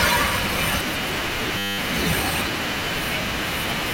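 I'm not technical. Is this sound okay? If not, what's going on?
No. From 1.58 to 1.78 s the speech turns into a steady buzz. This is a system hang loop: the computer briefly froze while the sound hardware kept replaying one tiny 10 ms scrap of audio, 20 times in a row. Because the scrap is so short, the repeats blur into a 100 Hz hum rather than a stutter. Unlike a dropout, the sound never goes silent, and almost none of the speech is lost.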